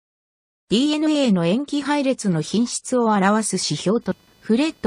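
From 2.24 s to the end, a faint buzzing chirp rides under the sound, pulsing at around 500 Hz and sitting roughly 40 dB below it. This is computer activity noise: processor or graphics load shifting the shared ground of the audio circuit, so the buzz follows the machine rather than the sound.

At 4.10 s a brief blip cuts through. This is damaged data in a compressed stream: corrupted bytes made the decoder misread the frame there and lose sync while it hunted for the next valid frame header.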